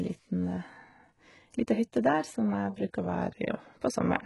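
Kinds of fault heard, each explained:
HE-AAC compression: The treble of this speech sounds synthesized, with gritty, lispy sibilants where copied low bands fail to match the true upper harmonics, likely from HE-AAC at a rate near 12 kbps. A spectrogram shows blocky, repeated patterns in the upper bands and nothing above 11.5 kHz.
Drift correction step: From 3.00 to 3.79 s, playback slows by 6% and pitch drops about 107 cents, roughly a semitone, before snapping back, likely a clock-matching rate jump. On a spectrogram, harmonics step down abruptly, then return; the waveform is stretched there.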